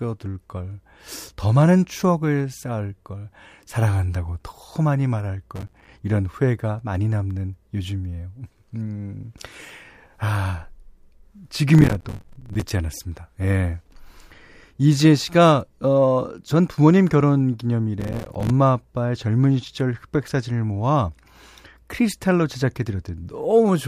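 Processor overload crackle tears through this speech at 5.56–5.89 s, 11.69–12.70 s and 18.00–18.50 s, where dozens of missed buffers of about 5 ms each drop out as hard-edged silent gaps.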